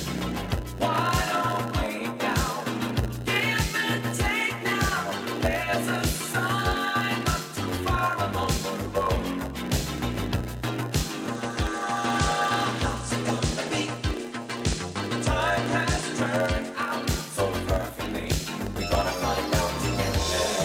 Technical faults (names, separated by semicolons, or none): block size mismatch (padded); digital radio blending to analogue